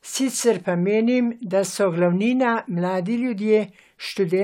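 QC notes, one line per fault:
No faults heard in this speech recording.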